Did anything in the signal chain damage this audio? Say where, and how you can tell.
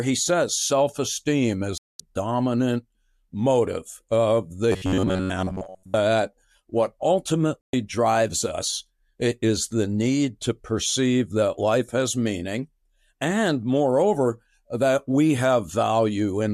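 Yes. A digital broadcast dropout, at the reception or decoding stage, mutes the sound from 1.78 to 2.00 s and again from 7.62 to 7.74 s. Each gap is a clean hole of about 0.22 s and 0.12 s, consistent with corrupted frames being muted and their content lost.

Between 4.72 and 5.98 s the sound becomes a rigid, metallic buzz fixed near 93.8 Hz, the robotic sound from repeated short buffers. That pitch implies segments of about 10.7 ms being looped in place of most of the real audio, likely a buffer underrun at the driver stage.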